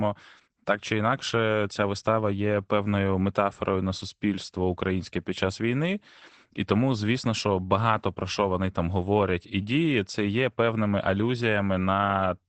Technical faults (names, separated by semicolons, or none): Opus voice compression